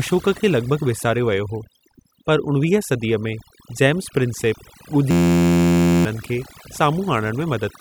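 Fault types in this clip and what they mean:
Overdone noise removal: Heavy noise suppression runs through the whole speech clip, cutting any frequency band close to the estimated noise floor. Between phrases the background drops to near silence, broken by twinkling, chirpy specks, and quieter parts of the voice are stripped away with it. On a spectrogram the background is almost black, with scattered isolated dots, and the speech harmonics look patchy and full of holes. The waveform sits almost flat between phrases.
System hang loop: From 5.11 to 6.05 s, playback froze while the audio hardware kept replaying one tiny piece of its ring buffer. A single 11.61 ms slice repeats exactly, which fits a 512-sample buffer, producing a steady buzz at 86.1 Hz in place of speech, and roughly a second of audio is lost. The waveform shows an identical short cycle tiled end to end, and the spectrogram shows flat, evenly spaced horizontal harmonic lines.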